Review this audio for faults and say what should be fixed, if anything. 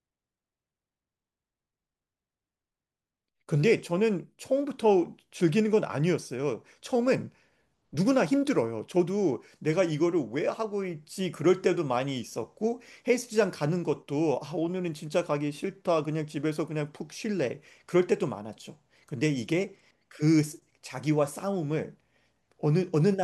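Nothing stood out on listening to this speech recording, so there is nothing that needs fixing.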